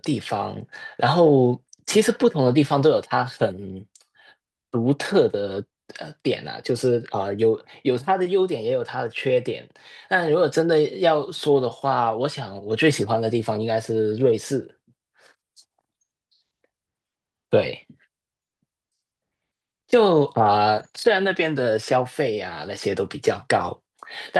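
Nothing stood out on listening to this speech recording, which came through an Opus call path.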